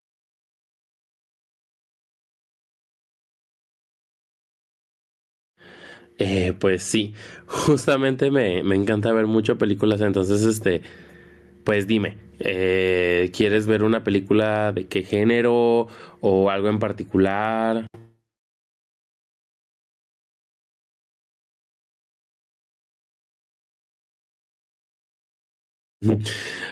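Gain pumping runs through the whole recording, likely from input gain set far too high with a fast limiter clamping it on each loud syllable. The gain swings by around 10 dB under speech, leaving the level squashed.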